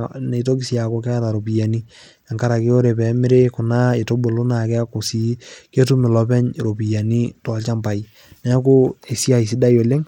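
From the start to the end of the speech there's plainly audible codec damage, and it sounds very much like Bluetooth SBC compression is the likely cause. The grain and roughness point to a small bit pool, something around 96 kbps, where SBC's simple per-band bit allocation starves the weaker upper bands and quantises the rest coarsely, leaving a gritty layer riding on the voice the whole way through.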